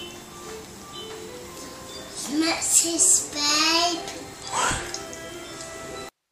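No technical faults can be heard in this audio, so there is nothing to describe in time order.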